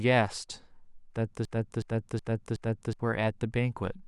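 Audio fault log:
1.45–3.00 s, broken-record loop: a fragment about 370 ms long repeats exactly four times back to back, so the speech stops moving forward and the same short slice replays at a steady rhythm for roughly one and a half seconds. The likely cause is a stall in the playback or streaming chain, which kept resending the last buffered piece instead of new audio. Whatever speech belonged in that span is missing, and the clip resumes after 3.00 s.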